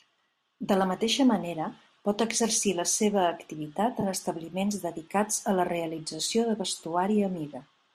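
Between "exercir la seva activitat" and "en establiments", at about 4.01 to 4.04 s, there is a brief AAC frame loss with concealment. Roughly 20 ms of audio is missing, which fits two short frames from the likely low-delay AAC coding. The decoder covers the gap by extending the previous spectrum with altered phase. The result is a short smeared, noisy patch in the speech rather than a hard dropout or click.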